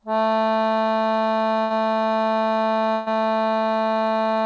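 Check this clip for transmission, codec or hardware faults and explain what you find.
Two bursts of packet loss interrupt the music, at 1.62 to 1.72 s and 2.92 to 3.08 s. Lost packets were concealed by stretching and fading the last sound, about 80 ms then 140 ms, before playback skips ahead. Unlike a dropout, neither gap goes silent.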